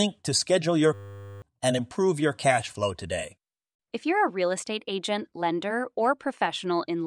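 From 0.94 to 1.42 s the speech gives way to a system hang loop: a single 10 ms slice of audio repeats exactly, about 48 times. The playback side appears to have stalled while the sound hardware kept reading the same ring buffer. Cycling at 100 Hz, the loop is heard as a steady buzz rather than a stutter, and roughly half a second of speech is lost.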